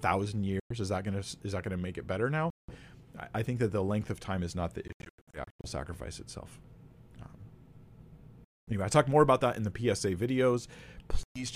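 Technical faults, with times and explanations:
0.60–0.72 s, 2.50–2.76 s, 4.88–5.65 s, 8.45–8.73 s and 11.23–11.44 s: Bluetooth dropouts. The sound cuts to silence, for roughly 0.11, 0.18, 0.23 and 0.12 s in the single gaps. Around 4.9–5.6 s, several short holes, the longest about 0.09 s, add up to about 0.46 s. Each time the audio resumes further along, as though it had kept playing. This likely comes from packets reaching the headphones too late and being discarded.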